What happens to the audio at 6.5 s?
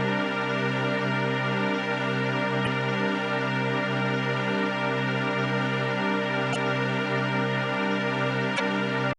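A burst of damaged data in the compressed stream runs from 6.52 to 6.56 s. Some stored bytes are wrong there. The decoder misreads those frames, loses sync and hunts for the next valid frame header. The result is a brief, harsh blip.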